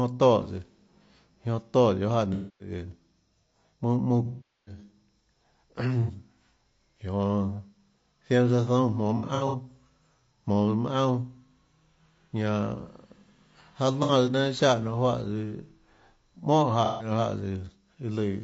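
Throughout the speech there is a constant rough, grainy texture, with hiss filling the gaps between pitch harmonics and a thin, synthetic-sounding top band. This is low-delay AAC compression, likely AAC-ELD at 32 kbps. Its very short frames resolve the voice's harmonic structure poorly, and at this bitrate that damage is plainly audible. It sits on every syllable rather than arriving in bursts, which separates it from the dropouts described below.

AAC frame loss with concealment occurs at 2.33 to 2.71 s, 4.25 to 4.78 s, 6.02 to 6.11 s, 9.17 to 9.56 s, 14.03 to 14.12 s and 16.85 to 17.11 s. During each loss the decoder keeps replaying the last good spectrum in altered form. The brief 60 ms patches at 6.02 and 14.03 s sound like a smeared, phasey blur. The 270 ms and 420 ms losses at 2.33 and 4.25 s decay toward silence and then fade back in. Around 9.17 s, 210 ms of audio is lost in short bursts spread over 360 ms, with no single gap much longer than a fraction of a tenth of a second. 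Unlike a hard dropout, none of these gaps cuts to dead silence abruptly.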